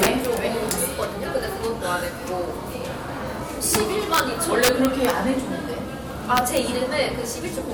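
Integer overflow cracks the loudest passages at 0.03–0.25 s, 0.71 s, 3.75 s, 4.14–4.20 s, 4.63–5.10 s and 6.37–6.57 s. Peaks pushed about 1 to 4 dB past full scale wrap to the opposite sign instead of limiting, producing violent, sharper-than-clipping cracks.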